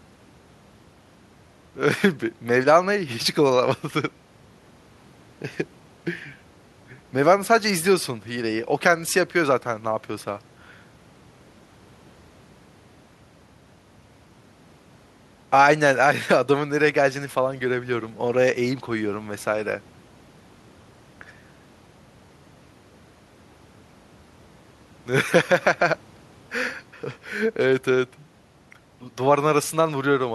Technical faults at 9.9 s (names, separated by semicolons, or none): none